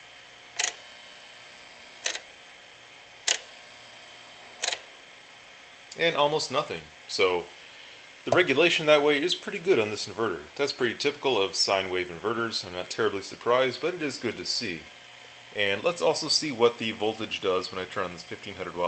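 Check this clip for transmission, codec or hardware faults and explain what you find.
Checking this clip turns up nothing to explain.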